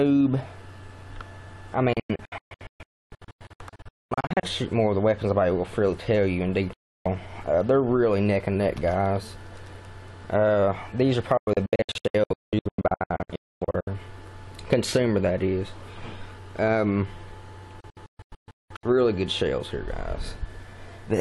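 Digital broadcast dropouts cut the sound four times. Frames were lost, so the receiver muted within 3 ms. Scattered holes run from 1.93 to 4.44 s and from 11.37 to 13.88 s. A single 0.32 s gap starts at 6.73 s. More holes follow from 17.80 to 18.84 s.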